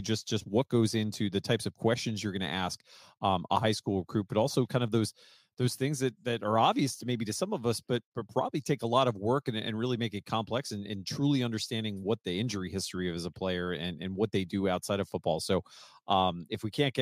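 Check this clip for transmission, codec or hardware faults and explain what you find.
Listening through the speech reveals no transmission, codec or hardware faults to report.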